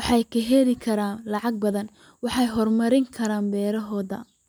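No technical faults can be heard anywhere in the recording; the signal stays continuous and intact throughout.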